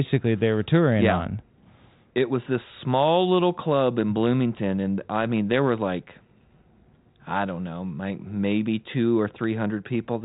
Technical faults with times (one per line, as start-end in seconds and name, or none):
none